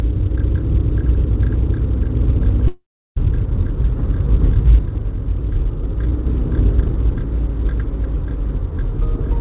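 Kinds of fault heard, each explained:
Long network dropout: the incoming stream likely stopped delivering packets for about half a second. From 2.68 s the receiver stretched the last sound into a fading buzz, then near-silence for about a third of a second. At 3.19 s the audio returns with the gap's content lost.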